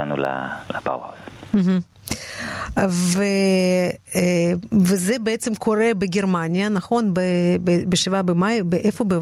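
Right from the start and all the way through, there's gain pumping on this speech. The level swings by around 20 dB. The likely cause is input gain set way too hot, with a fast limiter or compressor clamping down on each loud moment and letting go in the gaps. The result sounds squashed, with loud and quiet passages pushed close together.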